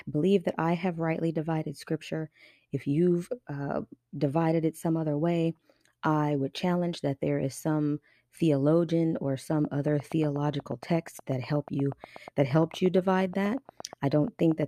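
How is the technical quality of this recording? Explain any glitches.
The recording has one clear technical fault, a train of clicks across the last few seconds of the speech. From 9.53 s to 14.64 s, about forty sharp clicks arrive at a steady 8.4 per second, evenly spaced and nearly identical in shape, peaking a few decibels above the speech itself. That regular, repeating pulse most likely comes from electrical interference from nearby equipment or a faulty connection or power supply. It is heard as a persistent ticking laid over the speech, continuing through the pauses.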